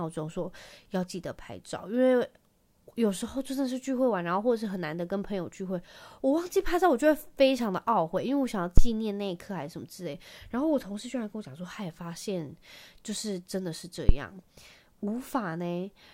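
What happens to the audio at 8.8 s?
A deep, low thump cuts into the speech at 8.78 s and is gone by 8.91 s. It peaks at about -5 dBFS and dies away quickly, with a decay of about 29 ms. This is a phantom power thump. The supply to the microphone input was switched while the channel was live, and that sudden DC step passed through the input's coupling capacitors as a single low-frequency pulse before they settled.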